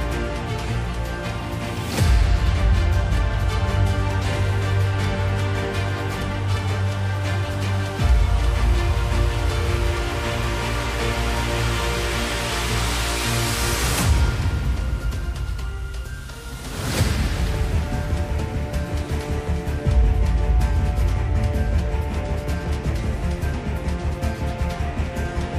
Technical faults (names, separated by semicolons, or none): compressed frames skipped